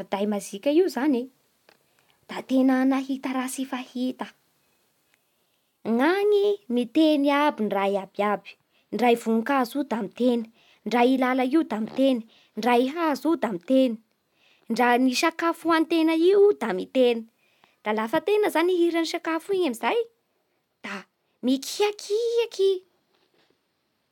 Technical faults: none

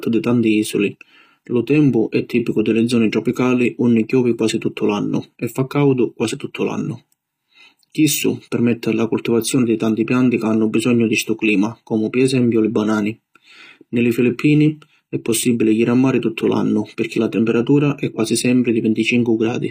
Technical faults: HE-AAC compression

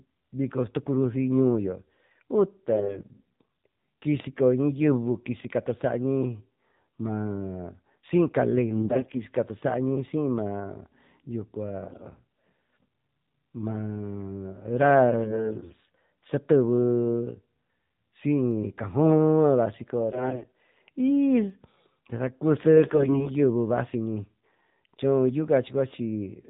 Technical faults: AMR narrowband mobile codec; AMR bit errors; dropped samples

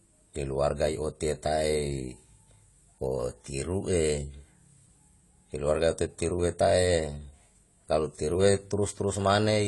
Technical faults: AAC compression

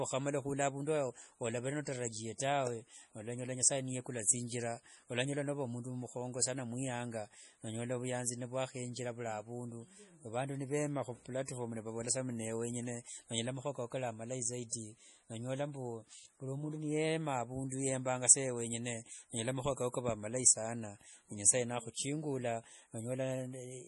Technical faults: MP3 compression; pre-echo

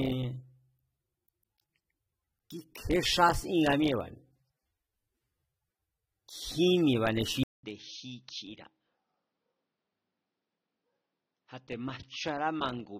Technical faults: AAC compression; input switched to a poorer device

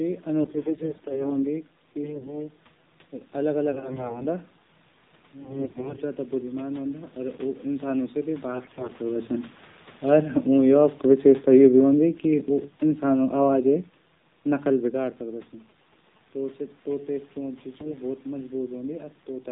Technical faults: AMR narrowband mobile codec; AMR bit errors; GSM signalling bursts

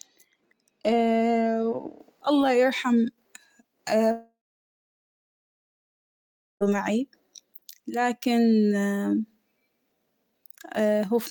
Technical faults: de-emphasis applied wrongly; long network dropout

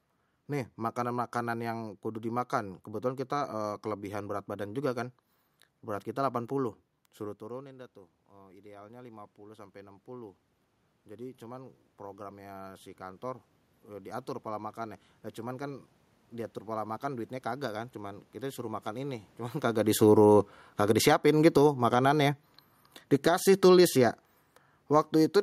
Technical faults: automatic gain rising; automatic gain falling

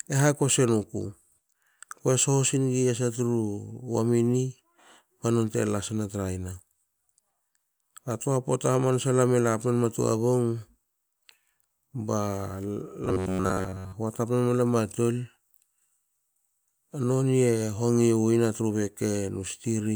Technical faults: robotic sound from repeated short buffers

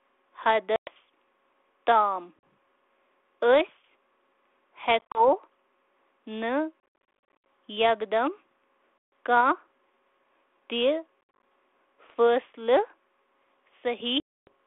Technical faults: packet loss on an ADPCM call

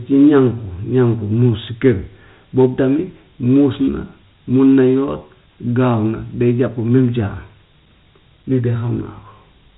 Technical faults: Dialogic VOX ADPCM

